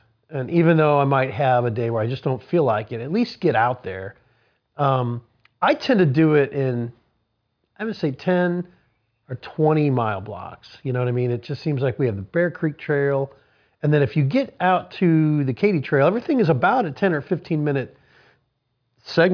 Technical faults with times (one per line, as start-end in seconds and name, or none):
none